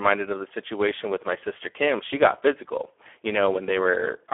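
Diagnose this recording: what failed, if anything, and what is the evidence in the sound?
Hoarse and noisy throughout, confined to a 300 Hz to 3.4 kHz telephone band with nothing above 3.6 kHz: heavy Speex codec damage, consistent with a setting near 8 kbps that starves the excitation.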